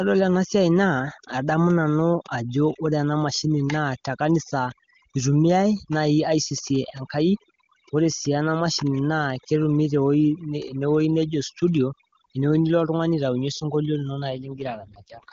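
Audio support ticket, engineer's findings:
Overdone noise removal across the whole clip: background dropped and broken up into twinkly specks. Suppressor set too aggressive, gating bands near its noise estimate and eating quiet speech.

AMR rate drop from 14.30 to 15.32 s, right after "osunkolio lino": no gap or band change, but speech goes rough and synthetic. Sounds like the AMR-WB link dropping from its clear 23.85 kbit/s mode to around 6.6 kbit/s on a weak radio link.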